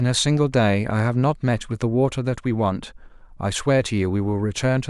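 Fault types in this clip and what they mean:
No technical faults can be heard anywhere in the speech recording; the signal stays continuous and steady throughout.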